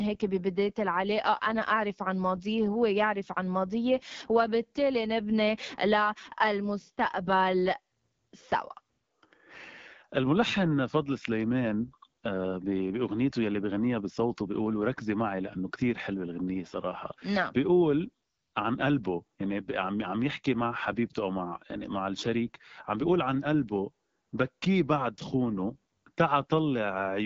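AMR wideband (HD Voice) codec damage runs through the whole clip. The speech is rebuilt from a pulse-excited vocal tract model, with shaped noise filling the top band and nothing above 7.5 kHz. The rough, raspy texture fits the 8.85 kbit/s mode, one of the two lowest rates.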